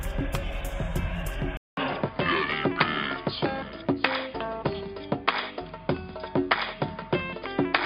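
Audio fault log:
1.57 to 7.85 s, input switched to a poorer device: after a 200 ms gap the sound turns dull, with nothing above 5 kHz, a level shift of roughly 5 dB and a faint new noise floor, likely from a swap to another microphone.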